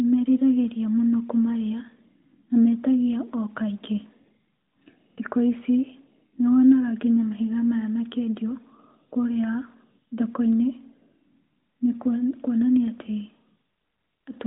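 The speech here has no technical faults. It has passed through the AMR narrowband mobile codec, which keeps nothing above 3.8 kHz and leaves only light coding texture, consistent with the codec's 12.2 kbps mode.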